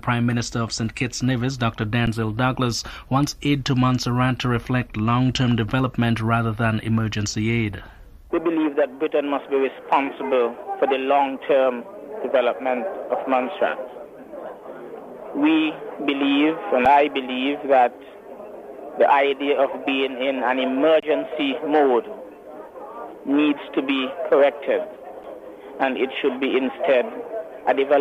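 At 2.06 s, 16.85 s, 21.00 to 21.03 s and 25.23 s there is an underrun with held sample. The output buffer ran dry, so the signal freezes flat for about 6 to 23 ms. Some audio is lost each time.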